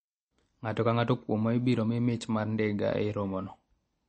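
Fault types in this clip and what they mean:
MP3 compression: this is likely an encoder running short of bits, consistent with a low rate around 32 kbps. It strips the treble at a fixed ceiling and drops quieter frequency lines that flicker between frames. Throughout the speech nothing survives above about 8.3 kHz, so the top end sounds dull and closed-in, and the encoding damage is plainly audible over the whole clip as a watery, swirly coloration on the speech.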